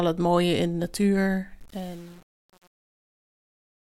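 Truncation distortion on a fade runs from 1.6 s to the end of this speech clip at about 4 s, riding the fade-out that begins around 1.6 s. The level falls smoothly, but the gain stage keeps too few bits and adds no dither. The resolution points to about 7 bits. As the signal sinks toward the smallest step, the waveform collapses into coarse square steps, so the tail turns gritty.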